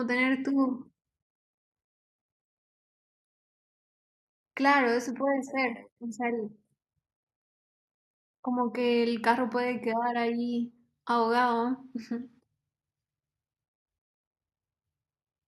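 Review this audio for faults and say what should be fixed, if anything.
No faults; nothing needs fixing.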